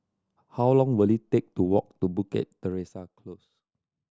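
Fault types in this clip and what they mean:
Zipper noise: From 2.4 to 3.56 s the level of the speech drops by roughly 20 dB in unsmoothed 1 dB steps, about 30 a second. Each jump leaves a small click, giving a fine ticking that rides on the voice during the fade. On a waveform the envelope falls as a staircase. A spectrogram shows faint vertical broadband lines spaced evenly through that stretch.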